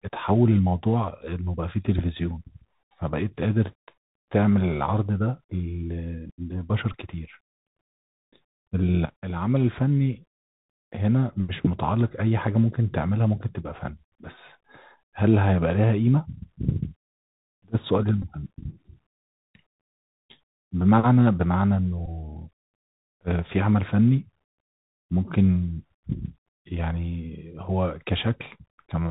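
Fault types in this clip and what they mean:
Bluetooth CVSD headset codec, throughout: one-bit up/down coding at 64 kHz with adaptive step cuts everything above 4 kHz, leaving scratchy s sounds and granular hiss.
Bluetooth headset packet repeated, at 6.92 s, 18.22–18.25 s and 22.06–22.08 s: about 15 ms re-decoded each time, which fits four 3.75 ms packets, giving a brief 267 Hz buzz.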